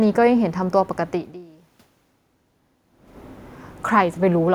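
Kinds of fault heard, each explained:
No system faults are heard.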